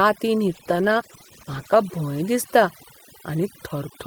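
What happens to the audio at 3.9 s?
At 3.9 s the speech is still under overdone noise removal, which runs through the whole clip. A noise reducer set too hard is shutting off frequency bands that sit near its noise estimate, taking quiet parts of the voice with them. The background drops and breaks up into twinkling specks.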